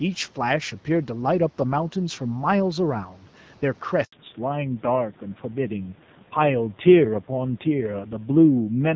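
At 4.04 s the speech stops abruptly and stays silent for 80 ms, until 4.12 s. This is a handover gap: the call was passed from one network to another, and no speech frames arrived while the link switched. What was said during that window is gone. It differs from ordinary packet loss because there is no stutter, repeated fragment or smeared concealment. The sound simply dies away quickly and then returns on a new path.

From 4.12 s to the end, the sound changes character. This is a fallback to narrowband: the call dropped from HD Voice to an older narrowband codec. Before the switch, the audio carries content up to about 7 kHz and sounds clear, which fits AMR-WB at around 12.65 kbit/s. After the switch, nothing remains above 4 kHz, so the voice turns duller. The speech also turns rough and grainy, which points to a low-rate AMR-NB mode near 5.9 kbit/s. A simple low-pass filter would only muffle the sound. 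Here the dullness comes with added coding roughness, and it begins exactly where the link changed.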